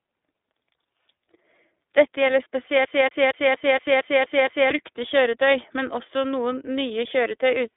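iLBC codec damage throughout: speech is coded in independent 30 ms frames, fitting the 13.33 kbps mode, confined to 300 Hz–3.6 kHz, plainly rough and synthetic.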